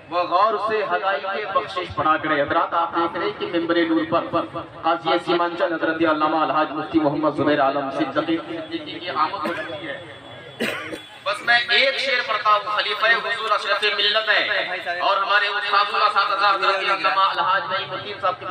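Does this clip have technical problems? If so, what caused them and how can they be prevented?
Yes. From 10.95 to 17.35 s, pre-emphasis was left on: a J.17 treble boost went uncorrected, leaving 10 kHz about 11 dB too strong, so the sound turns thin, bright and sibilant. To prevent it, apply matching J.17 de-emphasis at the receiving end and confirm that both ends of the chain use the same setting.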